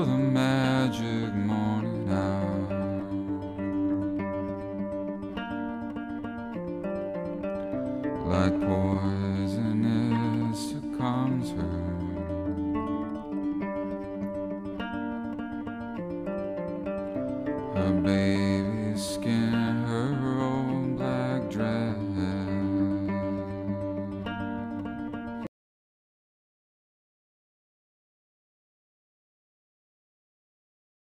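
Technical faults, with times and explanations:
25.47 s to the end: audio dropout to silence. The input feed was likely lost, through a disconnected device or failed link, while the recorder kept writing silence, so the sound stops abruptly mid-flow and the final 5.6 s are silent with no room tone at all.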